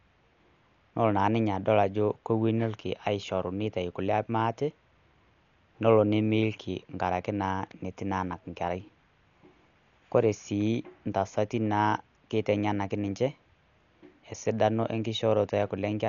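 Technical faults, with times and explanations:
Throughout, Dolby Digital compression is the likely culprit: nothing above 6.9 kHz, dull speech, rough fluttering noise-fill in starved bands, fitting roughly 48 kbps.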